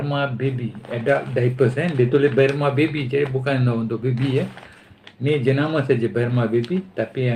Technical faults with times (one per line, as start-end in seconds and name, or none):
none